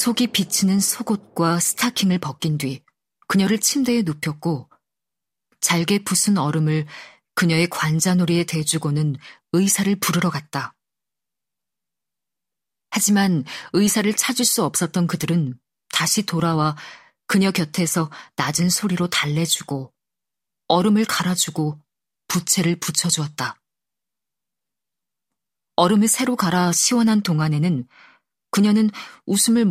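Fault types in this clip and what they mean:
Block size mismatch (truncated): one stage writes longer blocks than the next stage reads, so the tail of each block is discarded. From 0 to 13.31 s a buzz at about 43.1 Hz sits over the speech, which fits blocks of 1024 samples. Here the speech keeps its normal pitch and speed (1.0×). The steady block-rate buzz without silent gaps sets it apart from a padded mismatch or random dropouts.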